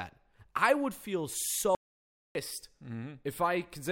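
Likely a lost input caused an audio dropout to silence at 1.75–2.35 s, after "i would feel": 0.6 s of dead silence, room tone gone.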